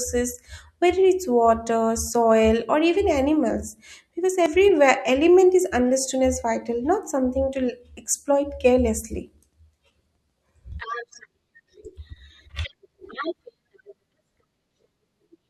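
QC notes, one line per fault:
4.46 s and 10.72 s, dropped buffer (overrun): the speech jumps forward, skipping roughly 40 ms at the first and about 20 ms at the second. The likely cause is samples not being collected before the hardware overwrote them, leaving the edges spliced directly.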